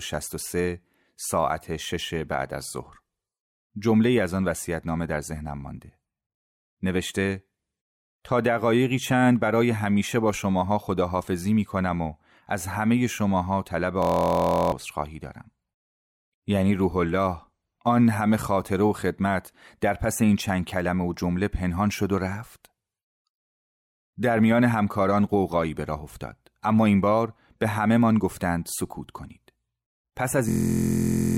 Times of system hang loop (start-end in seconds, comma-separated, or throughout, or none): 14.02-14.72, 30.49-31.37